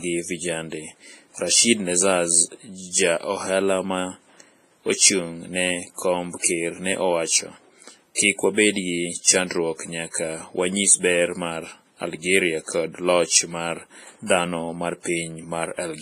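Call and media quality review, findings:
Likely WMA compression at a low bitrate, consistent with around 24 kbps: heavy transform quantisation, nothing above 15.5 kHz; speech sounds washy and ringing, hiss breathing with level.

Pre-echo at 8.15 s (31 ms) and 10.10 s (34 ms): block-wide quantisation noise leaks ahead of sharp attacks; brief hiss before onset, attack smeared.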